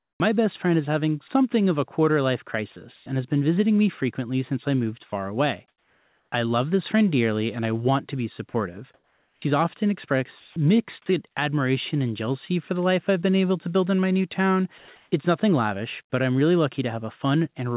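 A speech recording that came through a call path with discontinuous transmission, where the narrow telephone band leaves nothing above 4 kHz. Comfort noise in place of the background appears four times, at 0.0 to 0.2 s, 2.96 to 3.06 s, 5.68 to 6.32 s and 14.78 to 15.12 s. This is likely because the sender's voice detector judged these gaps silent and stopped transmitting, so the receiver generated its own noise. The real room tone gives way to a flat, featureless hiss that sits about 2 to 4 dB lower, and the background steps down and then snaps back when speech returns.

The same detector reacted late at 0.18 s, giving an onset clipped by the voice detector. The first 20 ms before "my best friend is" were likely never sent and were filled with synthetic noise, so the phrase begins with a hard edge and no soft attack.

From 8.5 to 9.42 s, right after "I want to be", the sound is chopped by the voice detector. 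Transmission likely toggled on and off more than once, and about half a second of that stretch in total became comfort noise. The speech has holes and sounds broken.

Sound is dropped by the voice detector at 10.4 to 10.56 s, just before "mixed admiration and jealousy", where about 60 ms of speech was likely mistaken for background and replaced. It happens again at 14.78 to 14.88 s, where 100 ms disappears. In both places the speech gives way briefly to steady noise or near silence before resuming.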